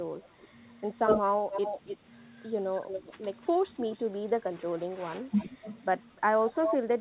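Through this speech, which tops out around 4 kHz the way a narrowband G.711 call would, there's an echo leak: a delayed, ghostly copy of the voice trailing by roughly 280 ms at first and drifting to nearly 300 ms by the end. It pops up at 0.24–0.45, 1.51–1.97, 2.88–3.13, 3.41–3.47, 3.8–4.05, 5.31–5.57 and 6.55–6.85 s. It's faint in some spots and fairly loud in others, strongest in that last stretch. The likely culprit is a far-end loudspeaker whose echo canceller let some of its pickup slip back.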